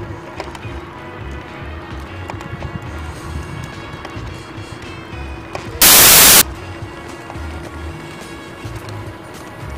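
From 5.82 to 6.41 s the audio turns into loud, harsh broadband noise, a case of samples built from the wrong bytes. The reader misassembles each sample, so the rapidly changing low bits become the large part of each value. The waveform shows a dense block, and the spectrogram shows broadband energy across the spectrum.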